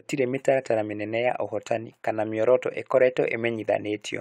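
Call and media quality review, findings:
No audible faults found in the speech recording.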